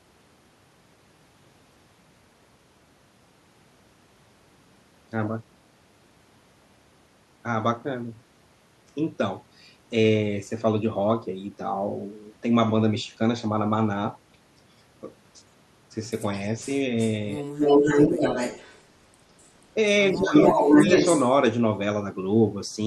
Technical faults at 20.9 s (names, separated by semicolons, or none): echo leak